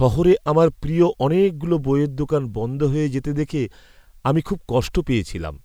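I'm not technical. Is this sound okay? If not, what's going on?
Yes, the speech sounds fine; nothing here is wrong.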